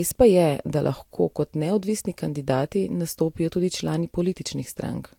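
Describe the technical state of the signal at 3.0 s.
At 3.0 s the speech carries generation loss, present throughout. It sounds swirly, smeared and hollow, with blurred attacks. The likely cause is about four lossy passes, each near 72 kbit/s.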